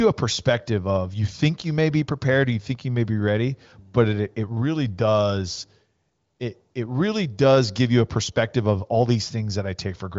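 A speech recording with no technical faults to report. It passes through the AMR wideband (HD Voice) codec at 23.05 kbit/s, and its band limit shows as an absence of content above 7.5 kHz.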